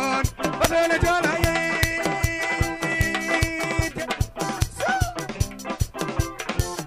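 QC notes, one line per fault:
0.64, 1.44, 1.83, 2.24, 3.01, 3.43, 4.62, 6.60 s: integer overflow. Peaks pushed only about 0 to 2 dB past full scale wrap to the opposite extreme instead of flattening, so each gives a violent crack, far harsher than the dulled squaring of clipping.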